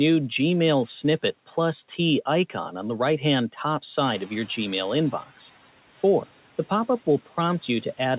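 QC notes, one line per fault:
4.07–5.61 s, noise suppressor catching up: the room noise steps up by about 12 dB at around 4 s and at first comes through with little reduction. Over 1.54 s it then sinks by about 10 dB as the suppressor's noise estimate adapts to the new level, which sits about 24 dB below the speech. Unlike gate pumping, this is one smooth fade after a single step in the noise, not a swell and dip that follows the speech.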